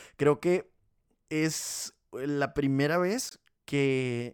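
At 3.29 s, just after "que es la primera", a corrupt frame decoded until 3.36 s. A few damaged frames were played anyway, their misread gains throwing energy onto wrong frequencies. The result is a brief burst around about -30 dBFS, seen on a spectrogram as a small misplaced block of energy.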